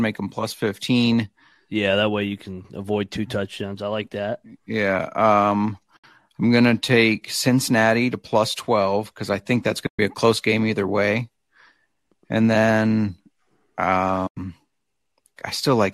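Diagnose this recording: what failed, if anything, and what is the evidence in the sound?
The failure is at the network stage: AAC frame loss with muting, on what is likely a low-delay AAC stream running at fairly light compression. There are three soft-edged dropouts. The first runs 5.97 to 6.04 s, about 70 ms, between "like that yeah um" and "i'm gonna take cincinnati". The second runs 9.87 to 9.99 s, about 120 ms, after "because i think that's" and before "be a close game". The third runs 14.27 to 14.37 s, about 100 ms. Each one fades out and back in. That shape fits lost frames being zeroed, with the overlapping windows smoothing the edges. The gap lengths suggest runs of roughly 10 ms frames.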